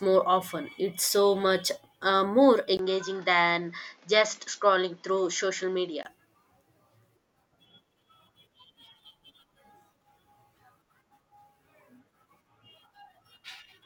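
At 2.77 s the speech breaks for about 20 ms, then returns duller and a few decibels quieter, with nothing above 7.4 kHz and a faint new background hiss sitting well beneath it. The character holds until 6.05 s, when the fuller sound comes back. This is most likely an input switched to a poorer device: the recording path changed to a narrower-band microphone with its own tone, gain and noise, then switched back.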